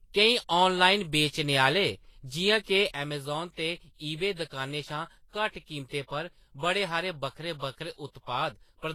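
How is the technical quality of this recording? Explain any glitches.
The recording has two clear technical faults. One runs through the whole clip, and the other affects the last two thirds.

Transcoding between lossy codecs is heard throughout. Nothing is present above 18.4 kHz. Smeared, swirly artefacts from two different codecs sit on top of each other. This is likely from a low-bitrate Vorbis encode followed by an HE-AAC encode. The second codec re-encodes the first one's damage and adds its own.

One channel drops out from 2.96 s to the end. The speech suddenly falls by about 6 dB and stays there. This is likely from a stereo channel being lost before a mono sum. The shared content halves in level, and anything unique to that channel vanishes.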